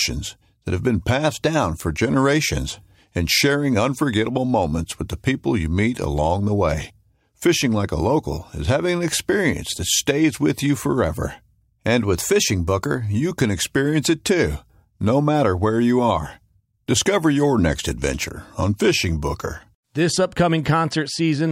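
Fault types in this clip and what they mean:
Drift correction step: Twice the audio runs about 6% fast and sits 101 cents sharp, roughly a semitone up, first from 1.25 to 1.85 s and again from 12.04 to 13.15 s, then drops back to normal speed. Speed and pitch move together, so the speech sounds sped up and raised rather than just retuned. That's likely clock-matching software stepping the playback rate to refill or drain its buffer, far beyond the usual tiny correction.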